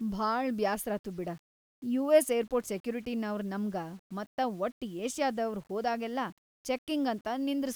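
From start to finish the speech carries a grainy, gritty distortion that rises and falls with the voice itself, rough on quiet syllables and tails, with the faintest passages sputtering or collapsing into silence. The error sits roughly 35 dB under the signal. This is likely low bit depth without dither: the audio sounds rounded to very few steps, consistent with about 8 bits, with no added noise to break up the error's link to the signal.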